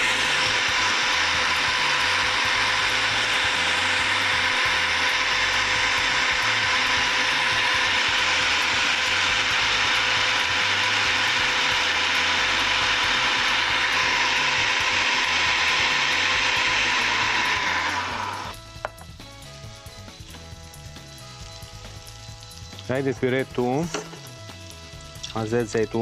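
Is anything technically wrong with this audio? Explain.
Yes. From 18.51 to 18.55 s the sound jumps abruptly ahead. A stream segment was likely skipped: one chunk failed to load and playback resumed at the next. The waveform shows a hard discontinuity, and the spectrogram shows a vertical seam where the content changes.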